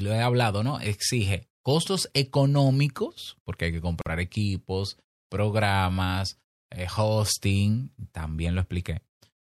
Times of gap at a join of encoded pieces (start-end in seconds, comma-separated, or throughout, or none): 4.01-4.06